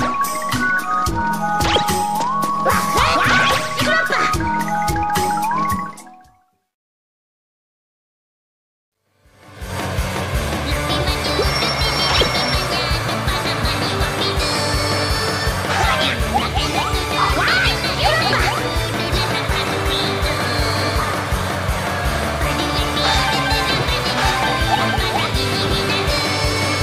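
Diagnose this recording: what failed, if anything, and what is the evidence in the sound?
Nothing in the recording points to a failure at any stage of the signal chain. No event in the sound gives evidence of one, so there is no stage or mechanism to identify.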